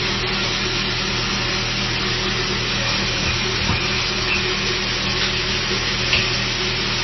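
Everyday sound runs the whole clip with heavy MP3 compression damage, likely from encoding at a very low bitrate near 24 kbps. Nothing survives above 5.9 kHz, and a watery, swirling texture with smeared attacks separates it from a plain low-pass filter.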